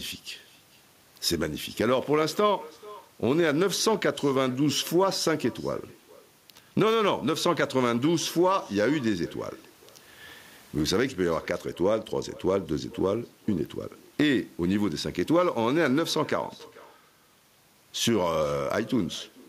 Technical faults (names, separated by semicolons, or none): echo with no canceller